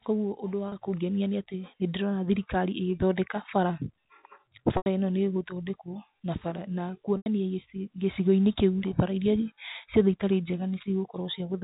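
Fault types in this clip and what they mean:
Packet loss with pitch repetition: Stretches of the signal went missing, and the receiver filled each one by looping the last pitch period. The 30 ms gap at 0.69 s comes out as a brief held, buzzy tone. The 90 ms gaps at 4.77 s and 7.17 s, which point to runs of about three lost packets, fade that loop to silence before speech cross-fades back. Plain dropouts give abrupt silence or clicks instead of this tonal hold, and the band-limited G.711 telephone sound is unaffected.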